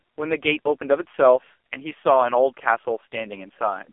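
From start to finish the speech passes through an AMR narrowband mobile codec. The voice sounds thin and telephone-like, with a hard ceiling near 3.5 kHz and little below 300 Hz. The coding damage is heavy. The voice has a buzzy, synthetic edge, which fits one of AMR-NB's lowest modes, around 5 kbps. On a spectrogram, energy stops flat near 3.5 kHz, with an empty band above. The harmonics look smeared and blocky in 20 ms steps.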